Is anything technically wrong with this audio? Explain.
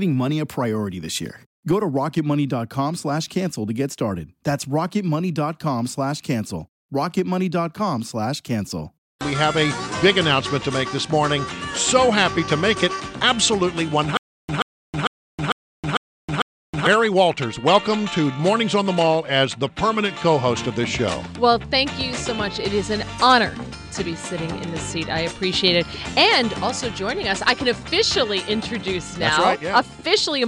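Yes. From 14.17 to 16.87 s there is a stutter with silent gaps. A 131 ms burst repeats six times, each followed by 319 ms of digital silence, in a steady 449 ms cycle. The likely cause is a stalled stream replaying its last fragment on each retry. Unlike a plain dropout, the same sound keeps returning.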